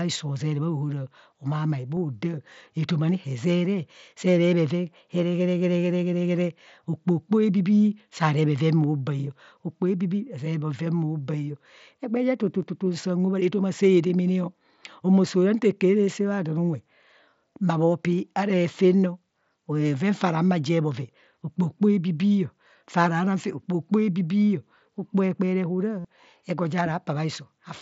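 Speech carried over an mSBC wideband Bluetooth headset link shows concealed Bluetooth headset packet loss. Brief 7.5 ms dropouts at 1.96 s and 12.62 s are patched almost invisibly. At 26.00 to 26.05 s, a 45 ms gap, which fits about six lost packets, becomes a short buzzy repeated tone before normal sound resumes.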